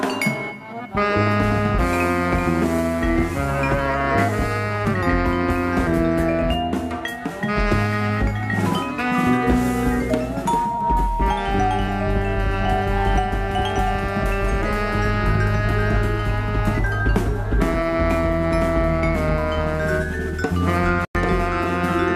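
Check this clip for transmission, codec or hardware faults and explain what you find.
No transmission, codec or hardware faults turn up anywhere in the clip. The audio runs continuously without any audible break or disturbance.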